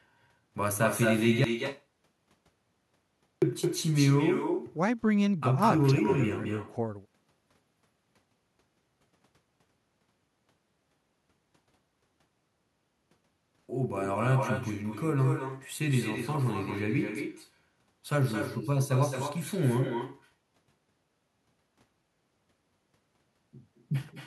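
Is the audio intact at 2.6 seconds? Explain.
No. From 1.44 to 3.42 s the sound cuts to silence, with no room tone, and about 1.98 s of speech is lost. This audio dropout to silence likely comes from the input being lost, such as a disconnected device or failed link, while recording continued writing silence.

Around that gap, the speech is shadowed by an echo with no canceller. A thinner copy arrives about a fifth of a second late and about 8 dB quieter. The far end's loudspeaker feeds its microphone, and nothing removes the returning signal.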